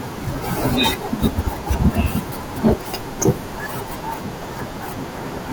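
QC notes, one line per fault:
2.66–2.72 s, hard clipping: for about 66 ms the speech peaks drive roughly 5 dB past what the signal path can carry, so the waveform tops are sheared off flat instead of rounding over. Those squared-off peaks generate a spray of high-order harmonics well above the speech band, heard as a short, gritty crackle riding on the loudest part of that syllable, then disappearing once the level drops back under the ceiling.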